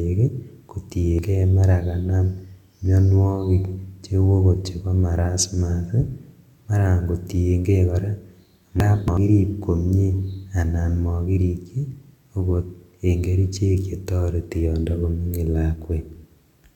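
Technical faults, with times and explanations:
1.00 to 1.19 s and 8.80 to 9.17 s, compressed frames skipped: the speech jumps forward, losing roughly a tenth of a second at the first point and roughly 0.4 s at the second, as whole frames of the coded stream were either absent or rejected by the decoder. The speech resumes further along.
10.04 s, corrupt FLAC frame: a brief error peaking at about -30 dBFS sits just before "anan mokirikchi okot en". Flipped bits inside the FLAC data fed wrong values into the predictor, and because the checksum went unchecked the decoder output the errors. Three frames were hit, with the next intact frame clean.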